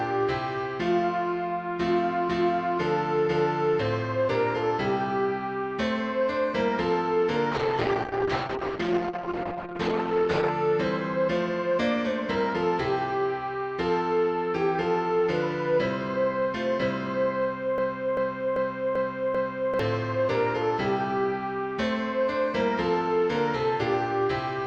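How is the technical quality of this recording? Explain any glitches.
The recording has two distinct glitches: a stretch of degraded, band-limited sound and a short stuck loop.

Call bitrate drop, 7.53 to 10.57 s. The connection's bandwidth estimate collapsed, so the encoder was forced to spend far fewer bits, which fits a fall from around 48 kbps to about 9 kbps. With so few bits, the coding turns coarse and the top end is cut, with the audio bandwidth shrinking from 20 kHz to 8 kHz. For about 3 seconds the sound is muffled and rough, with a watery edge, before clarity returns.

Broken-record loop, 17.78 to 19.79 s. A fragment of about 0.39 s repeats exactly, five times back to back, for roughly 2 seconds. This is likely a stall in the playback or streaming chain that kept resending the last piece of audio it held. The stutter replaces whatever should have played in that window, so that stretch of material is missing from the recording.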